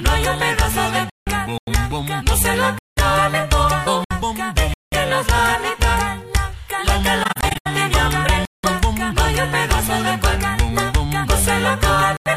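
At 1.10 s, AAC frame loss with muting leaves a 171 ms soft-edged hole. The decoder zeroed the lost frames, so the sound fades out and back in.

At 1.58 s, a 93 ms block of digital silence cuts in. The output dropped straight to zeros, with no fade at either edge. The length fits a 4096-sample buffer.

At 2.79 s, a 186 ms silent block cuts in and out the same way. This length fits an 8192-sample buffer.

At 4.04 s, a brief 64 ms muted frame loss fades softly.

At 4.74 s, another 186 ms hard-edged silent block cuts in.

At 7.23 s, muted frame losses scatter across 0.43 s, totalling 235 ms. The longest run is around 100 ms.

At 8.45 s, a 186 ms silent block cuts in.

At 12.17 s, a 93 ms silent block cuts in.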